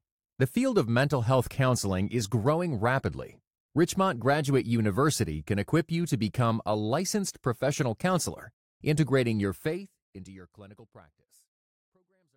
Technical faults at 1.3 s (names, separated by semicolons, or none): none